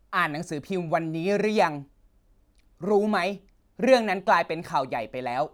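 Speech recording with no audible technical faults.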